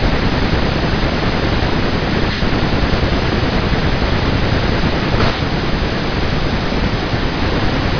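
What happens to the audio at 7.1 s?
Nothing goes wrong at 7.1 s; the speech continues cleanly through that moment with no dropout, click or other fault.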